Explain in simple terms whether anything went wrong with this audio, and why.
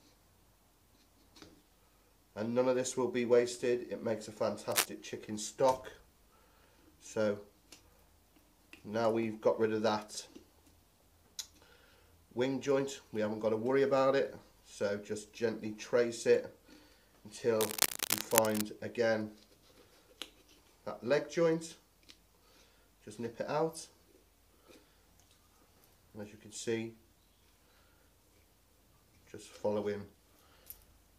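Twice, a harsh scratching, rustling burst cuts across the audio: briefly from 4.71 to 4.86 seconds, and for about a second from 17.60 to 18.61 seconds. Each burst is roughly as loud as the sound itself, so it is hard to ignore. This is cable scratch noise. The likely cause is a worn cable, plug or control being moved, so its electrical contact rapidly flickers between good and poor, injecting uneven bursts of noise into the signal.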